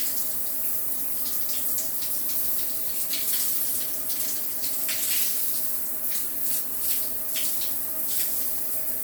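From start to finish the upper range has a breathy, grainy edge, its detail replaced by noise. This is likely Bluetooth LC3 compression discarding high-band content and noise-filling it, which fits a bitrate near 48 kbps with 10 ms frames.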